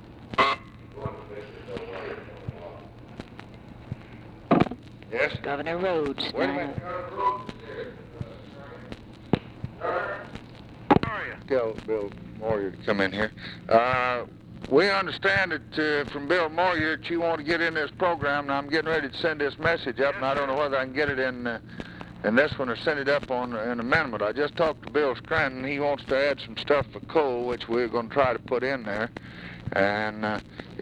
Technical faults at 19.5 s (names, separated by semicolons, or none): none